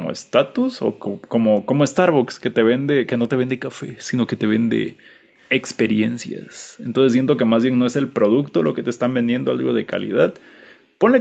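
Background gated by the echo canceller, at 0.1 to 0.53 s, 0.86 to 1.46 s and 4.26 to 5.35 s: the room tone behind the speech sinks away and then comes back. Each time, the echo canceller decided the loudspeaker was playing and pulled the microphone down, by up to about 40 dB. The gaps come across as brief holes of near silence, a few tenths of a second in the first two spans and closer to a second in the third.

Echo leak, at 5.41 to 5.79 s: a faint, delayed double of the speech trails the original by 281 ms, sitting roughly 25 dB under it. The likely cause is a far-end echo canceller that did not fully remove what its microphone picked up from its loudspeaker, which sent that copy back down the call.

Background gated by the echo canceller returns from 6.11 to 11.0 s. It is the longest stretch, with about four seconds of the background cut away in dips of up to about 40 dB. The canceller keeps clamping the microphone while it believes the loudspeaker is playing, so the ambience drops out and then reappears when the suppression eases off.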